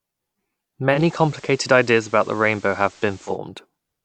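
At 0.90 s the speech cross-fades over about 140 ms from the digital stream to the station's FM broadcast, a case of digital radio blending to analogue after the receiver lost the digital signal. From there a steady hiss sits roughly 25 dB below the speech, with no change in level. At 3.39 s the receiver blends back to digital, removing the hiss.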